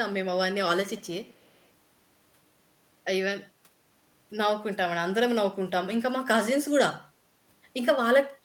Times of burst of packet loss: none

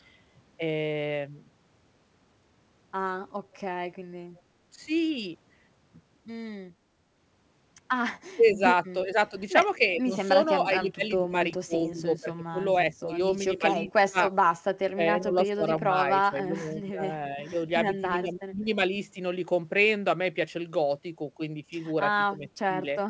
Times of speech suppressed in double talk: 8.36-9.33, 9.98-14.21, 14.93-18.69, 22.38-22.82

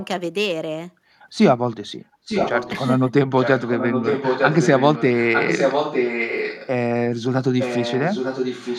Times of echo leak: 0.00-0.06, 2.25-2.89, 3.38-6.69, 7.59-8.79

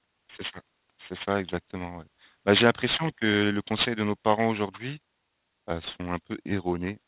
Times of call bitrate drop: none

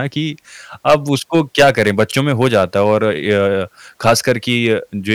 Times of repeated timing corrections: none

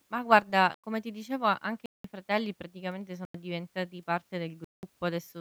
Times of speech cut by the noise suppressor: none

